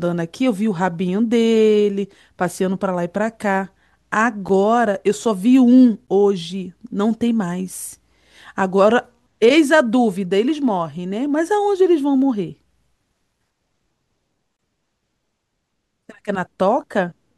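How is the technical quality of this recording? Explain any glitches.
The recording has three brief dropouts, each a block of digital silence. Short gaps at 4.49 s (about 8 ms) and 6.07 s (about 12 ms) land as ticks, while the longer one from 14.57 to 14.59 s (about 23 ms) is a small audible hole in the speech. The output buffer likely went unfilled and was sent as zeros. The 12 ms and 23 ms gaps fit 512- and 1024-sample buffers. A waveform shows near-flat silent stretches, and a spectrogram shows black vertical gaps bordered by thin broadband lines.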